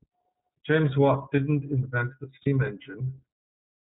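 The whole clip runs through the iLBC codec, and you can plainly hear it: the speech is band-limited to 4 kHz, so it's dull up top, with a slightly rough, synthetic edge from coding each frame's excitation on its own. The texture fits the 30 ms frame mode at around 13 kbps. Then at about 2.42 to 2.47 s there's a lost iLBC frame, most likely a single 30 ms packet. The decoder fills the gap by repeating the last pitch cycle mixed with noise, so you get a brief held, faintly buzzy vowel. Because the frames are independent, the speech snaps back right away.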